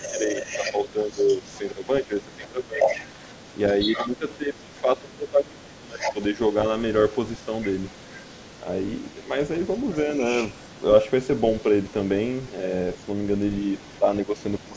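It's a speech recording from a call, and it has two problems. First, there's speech suppressed in double talk: the talker gets pushed down from 0.0 to 2.88 s, 3.74 to 6.32 s, 8.63 to 9.32 s and 13.65 s to the end, dipping by roughly 15, 20, 10 and 15 dB. That's likely the echo canceller clamping down when both sides overlap. Second, the other side's voice leaks through, most likely as loudspeaker echo the canceller didn't fully remove. It's fairly strong from 0.02 to 1.87 s at about 10 dB under the talker, stronger still from 2.44 to 4.81 s and 5.99 to 6.23 s at about 5 dB under, and then a faint trace from 7.43 s to the end at about 25 dB down. The call processing tops out around 8 kHz.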